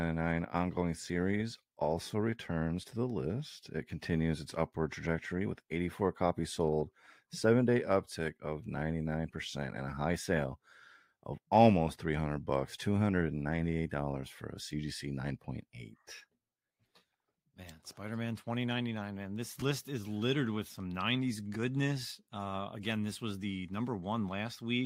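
At 16.73 s one Bluetooth LE Audio frame is lost, about 10 ms, and at 19.60–19.62 s two more, 20 ms, just before "list is littered with". Both times the LC3 decoder fills the gap by reusing the previous spectrum with random signs. Each sounds like a brief noisy smear, visible as a short smeared, harmonic-less patch on the spectrogram, with the light codec compression around it unremarkable.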